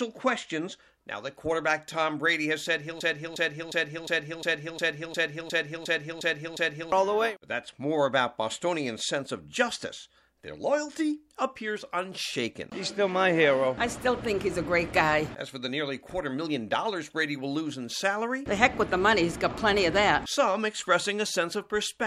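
From 3.0 to 6.9 s there's a broken-record loop: a 0.36 s fragment repeats 11 times, likely a stalled player or stream, and the real audio is lost.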